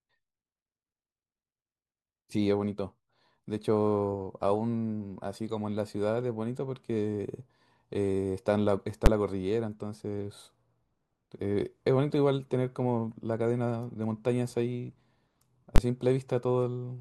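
At 9.06 s the speech is broken by a single loud bang. This is invalid numbers at full scale. A calculation went wrong and produced infinite or invalid values. These were pinned to the largest possible sample value, so the output sat flat at one extreme value, far beyond the speech's peaks, for a 10 ms block. The block is too short to hear its start and end apart. It lands as one sharp crack. The same fault returns from 15.76 to 15.78 s, lasting 20 ms, and again sounds like one hard bang.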